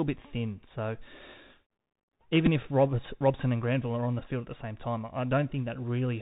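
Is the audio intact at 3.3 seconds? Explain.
No, the Bluetooth CVSD headset codec runs through the whole speech clip, including 3.3 s: its one-bit adaptive-step coding caps the band near 4 kHz and adds granular hiss and scratchy s sounds that plain band-limiting wouldn't.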